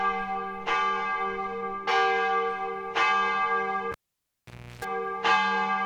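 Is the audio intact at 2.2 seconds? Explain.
Yes, the sound at 2.2 seconds is intact, with no dropout, click, distortion or other fault at that moment.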